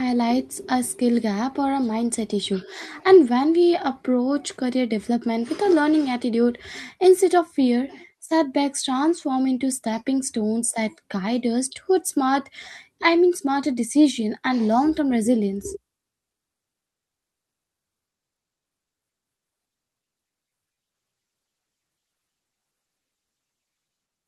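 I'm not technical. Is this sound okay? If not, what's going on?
Yes, this sound is okay; there's nothing wrong going on with it.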